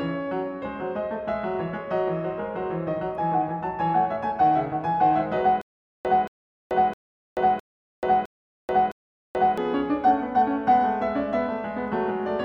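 From 5.61 s to 9.58 s the music catches on itself: a fragment about 0.23 s long plays, drops into dead digital silence for about 0.43 s, then plays again, six times at a steady 0.66 s pace. This stutter with silent gaps likely comes from a stalled player or stream that replayed its last buffered fragment on each retry and then ran empty, so whatever music belonged in those four seconds is simply gone.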